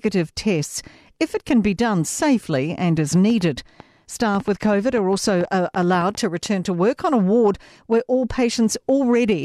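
From 3.30 s to 6.47 s, between "done safely and as" and "to work on a", a train of clicks runs over the speech: about twenty similar pulses at an uneven pace, averaging 5.7 per second and peaking roughly 5 dB above the signal. This is likely interference or a faulty connection or power supply.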